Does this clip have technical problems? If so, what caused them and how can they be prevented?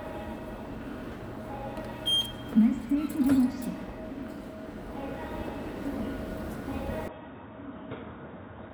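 Yes. From 7.08 s to the end, the sound abruptly turns dull and boxy, with nothing above 3.8 kHz, drops in level by roughly 10 dB, and picks up a faint new background noise well below the signal, all with no gap at the change. The likely cause is an input switched to a poorer device mid-recording, one that passes a narrower band and adds its own tone and noise. Locking the recording input to a single chosen microphone prevents this.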